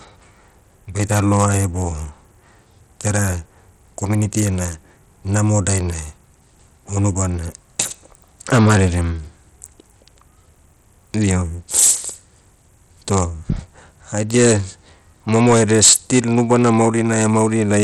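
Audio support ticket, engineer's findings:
Low SBC bit pool on the Bluetooth link, likely cause. Throughout the speech, coarse sub-band quantisation and starved upper bands. Nothing above 14.5 kHz; treble thin and flickering, gritty grain and aliasing riding on the sound, plainly audible. Damage level fits a low setting around 80 kbps.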